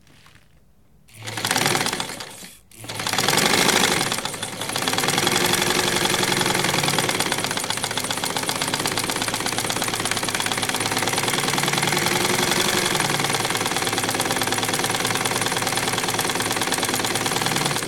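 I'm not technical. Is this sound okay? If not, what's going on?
Yes, this sound is fine, with nothing going wrong at any point that you'd need to worry about.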